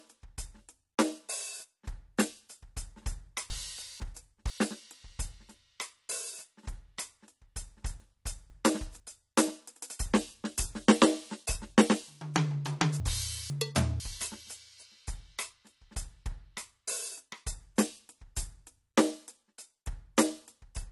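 Throughout the music, nothing sounds above 11.9 kHz, and the sound is dull and smeared with fizzy warbling, likely AAC compression at a low bitrate near 32 kbps. This differs from simple low-pass filtering because of the swirling artefacts. At 3.5–4.5 s, 8.0–9.0 s and 13.0–14.0 s, chunks play out of order: two half-second pieces swap places, so the passage jumbles. Unlike a dropout or skip, no audio goes missing.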